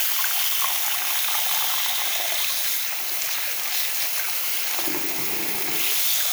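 No technical faults can be heard anywhere in this audio.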